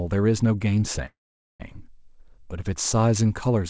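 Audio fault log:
1.06–1.62 s, call audio freeze: the sound stalls, a short buzzy carry-on fades into 0.45 s of silence, then resumes right where it stopped with nothing lost, so the rest runs 0.54 s late. Likely delayed packets draining the jitter buffer.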